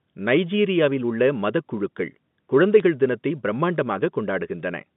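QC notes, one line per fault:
2.80 s, bit errors on a digital phone line: a brief hit on two frames of the speech. A few flipped bits change individual samples.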